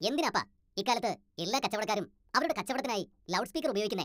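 Throughout the speech, a wrong sample rate makes everything run 1.5 times fast and about 7 semitones high, which fits 32 kHz audio played at 48 kHz. Unlike a pitch shift or time-stretch, speed and pitch rise together, giving hurried, chipmunk-like delivery.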